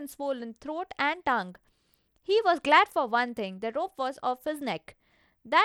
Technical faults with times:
0.00-5.65 Bluetooth SBC compression

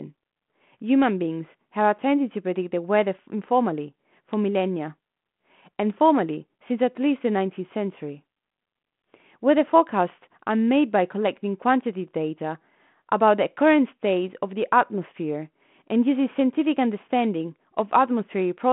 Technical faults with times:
none

